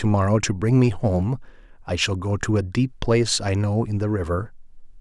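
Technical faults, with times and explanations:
Nothing technical stands out here, and the speech comes through without any faults worth flagging.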